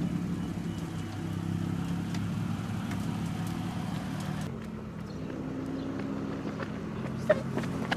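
No technical faults can be heard anywhere in the clip. Nothing in the audio calls for a timestamp or an explanation of what went wrong.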